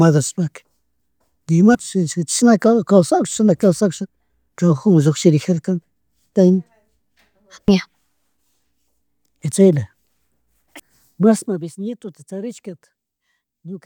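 From 11.22 to 11.7 s a fine ticking rasp rides on the speech while the level falls by around 15 dB. That is zipper noise. The gain drops in coarse, unsmoothed steps, about a hundred each second, and every jump makes a tiny click. In quick succession they merge into a zipping texture for the half-second the level moves.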